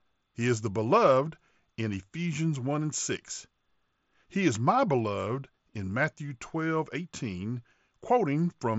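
Speech carried over a Bluetooth mSBC headset link, with nothing above 7.7 kHz as expected of that wideband codec, and no faults present.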